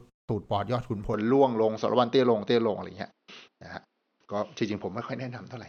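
At 1.14 s the speech abruptly loses its top end. Nothing above about 6.1 kHz remains through to the end. The tone shifts, the level moves by a few decibels, and a faint new background noise appears well below the speech, with no gap at the change. The likely cause is an input switched to a poorer device mid-recording. A simple filter or codec bandwidth drop would narrow the band without bringing a new noise floor and level with it.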